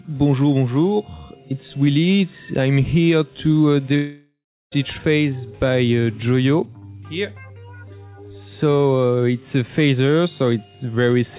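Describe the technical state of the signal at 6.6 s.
At 6.6 s the audio is intact, with no fault present, only the narrow band of the call path, which carries nothing above 4 kHz and fits a G.711 mu-law codec at 64 kbps.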